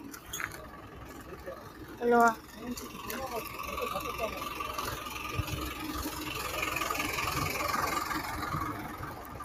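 The level of this sound recording pumps and thins throughout, with held sounds and tails sinking while sharp onsets get through. A speech noise suppressor applied to music or sounds has been left on, treating steady content as noise and swinging its attenuation over a range of roughly 10 dB. At several points the noise suppressor cut the sound further, pulling steady or decaying material down harder: about 6 dB at 0.14–0.29 s, about 7 dB at 0.6–1.97 s, about 6 dB at 2.37–2.62 s, and about 7 dB from 8.87 s to the end.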